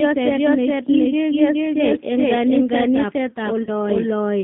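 From the start, there's a doubled audio track: a second, full-band copy of the speech trails the original by roughly 0.4 s, at about the same level, with no decay or room colour. That's likely a second capture over a slower path, or an edit stacking two misaligned copies.

Throughout, the line is squeezed into roughly 150 Hz to 3.6 kHz and has that slightly rough, synthetic texture of the G.729 codec. The damage is plainly audible and fits a G.729A stream at 8 kbit/s rebuilding the voice from a filter and pitch model.

At 3.63 to 3.70 s there's VoIP packet loss concealed by the speech codec. Around 40 ms of audio went missing, which fits two lost packets. The decoder stretches the last sound into a fading buzzy tone or coloured noise, and the voice stays weak briefly after.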